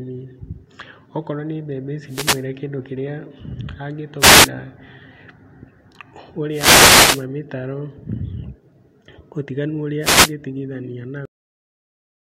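Bursts of static swish across the speech at 2.07–2.45 s, 4.18–4.50 s, 6.50–7.26 s and 10.00–10.33 s. These are wireless microphone noise hits: the analogue FM radio link fades as reflected signals cancel, and the receiver's noise rises up over the voice. At 11.25 s the speech halts mid-sound and falls straight to digital silence with no decay. That cut-off end means the final buffers never reached the output.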